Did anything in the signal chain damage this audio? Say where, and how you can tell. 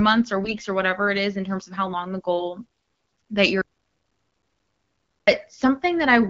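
Yes. At the network stage, AMR bit errors from 0.44 to 0.60 s, before "or whatever it is", make speech hoarse and gargly at steady pitch and level, as flipped unprotected bits misplace excitation pulses.

An audio dropout to silence runs from 3.61 to 5.27 s. For 1.66 s the signal is silent, with no room tone, likely a lost input while writing continued.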